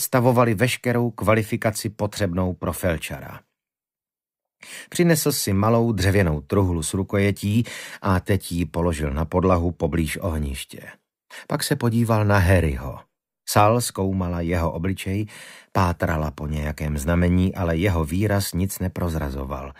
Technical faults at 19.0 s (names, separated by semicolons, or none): none